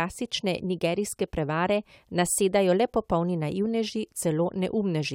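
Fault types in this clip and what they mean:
No faults can be heard in this speech recording.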